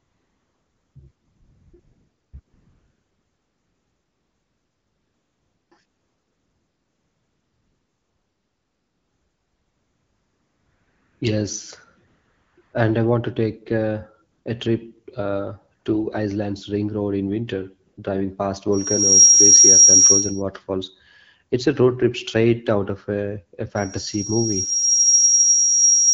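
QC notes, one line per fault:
0.00–17.97 s, AMR comfort noise: ten pauses, from 60 ms to 5.36 s, with the longest at 2.39–5.71 s and 5.85–11.21 s. Shorter ones sit just before "and I want to" at 12.07 s, just after "want to take uh" at 14.31 s, and between "in winter" and "driving past" at 17.91 s. In each, the sender stopped transmitting speech frames and the receiver generated smooth noise from a rough level-and-spectrum description, so the real background switches to a flat hiss and back.
18.72–20.42 s and 23.75 s to the end, loudspeaker feedback squeal: a single tone at 5.6 kHz builds up. In the first event it rises over about 0.4 s to about 15 dB above the speech. In the second it rises over about 1.5 s to about 10 dB above. A microphone is picking up its own loudspeaker, and at 5.6 kHz the loop gain exceeds one, so that frequency keeps reinforcing itself into a howl. This happens on top of the 12.65 kbit/s AMR-WB path, which carries the speech clearly.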